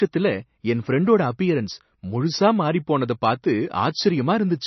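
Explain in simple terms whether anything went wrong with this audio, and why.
Throughout the speech, nothing is heard above about 5.9 kHz, and the sound has a watery, swirly quality with smeared consonants. That is likely heavy MP3 compression. A plain treble cut would sound muffled but clean, while this swirling comes from quiet detail flickering in and out.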